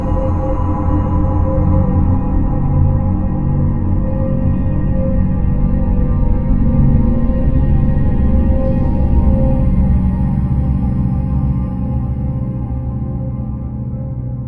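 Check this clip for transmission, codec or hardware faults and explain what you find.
No transmission, codec or hardware faults can be heard anywhere in this recording of sounds. Nothing in it calls for further explanation.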